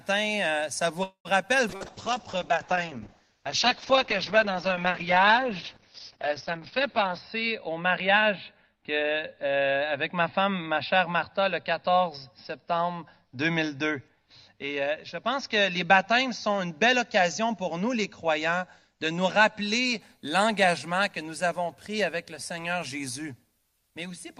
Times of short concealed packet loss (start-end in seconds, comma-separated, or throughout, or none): 1.77-1.83